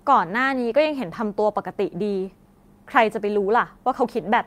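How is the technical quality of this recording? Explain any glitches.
Nothing stood out on listening to this speech recording, and there are no glitches to explain.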